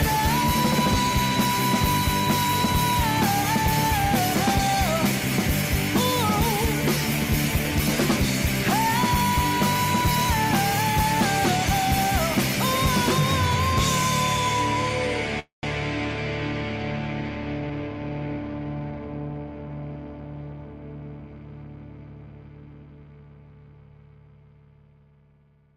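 At 15.39 s there's a call audio freeze lasting to 15.65 s, likely from delayed packets draining the jitter buffer: a fading buzz, then silence, nothing lost. From 17.64 to 19.48 s a jitter buffer speed-up trims small pitch-period chunks, running at 111% speed, same pitch, shedding about a fifth of a second.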